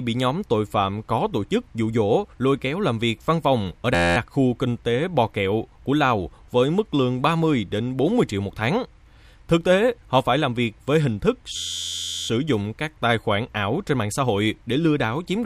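Two stretches lock into a system hang loop, at 3.95 to 4.17 s and 11.56 to 12.28 s. A single 11.61 ms slice repeats exactly, producing a steady 86.1 Hz buzz. That fits a 512-sample ring buffer cycling on while the driver froze.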